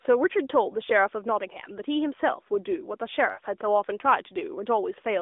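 Lost AMR speech frames at 3.32 to 3.40 s: corrupted frames failed their checks, so the narrowband decoder repeated the last good pitch and vocal tract settings at falling gain. About 60 ms of speech, which fits three 20 ms frames, smears briefly, sags in level, then recovers slightly rough.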